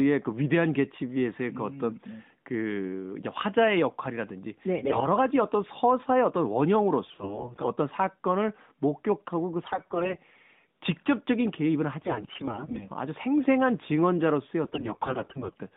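Hoarse, scratchy, gargling bursts break into the speech at 4.78–5.07 s, 7.10–7.68 s, 9.64–10.18 s, 12.00–12.88 s and 14.64–15.56 s, while pitch and loudness stay roughly steady. These are AMR bit errors. Corrupted low-priority bits misplace the excitation pulses and skew the fine gain and spectral values, and the last two bursts are the roughest.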